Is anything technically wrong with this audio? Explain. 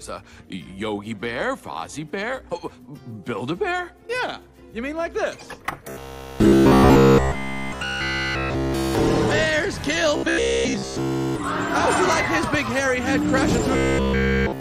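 Yes. Robotic sound from repeated short buffers appears three times: 5.89 to 8.95 s, 10.17 to 11.37 s, and 13.73 to 14.6 s. Each time the audio turns into a rigid, metallic buzz at 66.7 Hz. The likely cause is new data arriving too seldom, so playback loops the last 15 ms block. Essentially all of each stretch is repeated material, with the real audio skipped. The sound keeps only a rough outline under the buzz.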